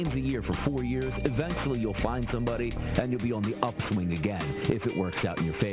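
Aliasing runs through the whole clip. The sound appears to have been cut to a much lower sample rate with no anti-alias filter first. The band stops hard at 4 kHz, which points to an 8 kHz rate. Content that sat above that fold was not removed. It mirrored back below 4 kHz as false, unrelated tones, sitting roughly 15 dB under the wanted sound. High, bright detail turns gritty and metallic, with a harsh edge packed against the top of the band.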